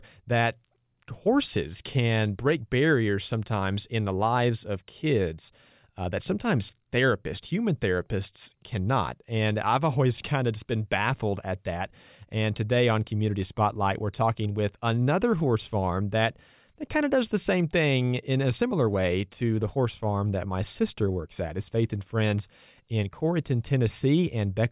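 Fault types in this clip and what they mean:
No technical faults can be heard in this speech recording. Nothing in the audio points to a problem in how it was captured, processed or played back.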